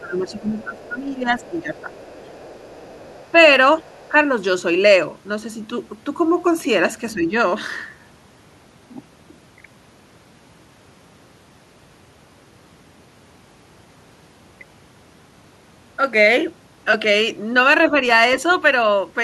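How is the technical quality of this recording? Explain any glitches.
The recording has two related echo-control problems. Both cluster in the first four seconds, with brief recurrences later.

Speech suppressed in double talk runs from 0.0 to 1.88 s, with shorter dips at 3.78 to 3.92 s, 4.1 to 4.15 s, 7.14 to 7.34 s and 17.9 s. The talker's voice sinks, by up to about 10 dB early on, and about 5 dB in the later dips. This is likely an echo canceller ducking everything while both sides talked.

The other side's voice leaking through appears at 1.38 to 1.62 s, 1.78 to 3.31 s and 3.86 to 4.09 s. A faint second voice sits about 25 to 30 dB below the speech. It was likely loudspeaker echo the canceller failed to remove.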